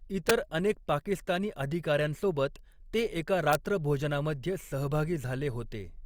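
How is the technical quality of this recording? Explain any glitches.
The recording has two integer overflow cracks, at 0.29 s and 3.53 s. Peaks about 3 dB over full scale, then barely over, wrapped to the opposite sign instead of limiting, giving violent snaps harsher than clipping.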